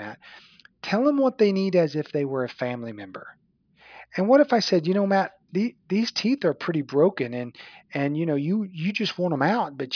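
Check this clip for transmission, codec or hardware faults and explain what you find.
Nothing in the speech points to a transmission, codec or hardware problem.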